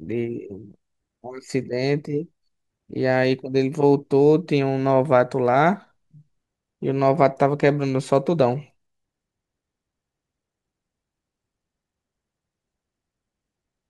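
A speech recording with no technical faults to report. Nothing in it calls for a time stamp or a cause.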